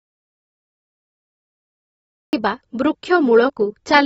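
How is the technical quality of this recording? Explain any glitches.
Poor. The audio is silent for more than half its length, and everything that remains carries clearly audible compression damage.

Audio dropout to silence, from the very start to 2.33 s. The input was already lost when the clip begins, likely from a disconnected source or a dropped link, while the recorder kept writing silence. The result is dead silence with no room tone at all. The speech only appears at 2.33 s, arriving mid-flow rather than starting naturally, and whatever was said before that point is gone.

AAC compression, throughout. The damage likely comes from AAC-LC encoding at a low rate, and the sound points to something near 28 kbps. Nothing is present above about 7.6 kHz, because the encoder lowered its cut-off to save bits. The remaining spectrum has been quantised coarsely, with gaps and filled-in bands. 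The speech sounds dull and smeared, and sibilants and sustained sounds take on a fizzy, warbling texture.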